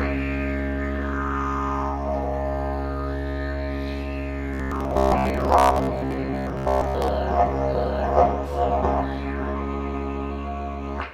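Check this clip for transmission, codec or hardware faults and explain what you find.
One fault is present: robotic sound from repeated short buffers, from 4.54 s to 7.08 s in this music clip. The likely cause is audio arriving too infrequently, with the playback software repeating the last fragment of roughly 15 ms to fill each gap while the real signal is dropped. Around seventy percent of the passage is filled this way. The repetition imposes a steady 66.8 Hz buzz, so the music turns rigid and metallic, loosely tracking the original.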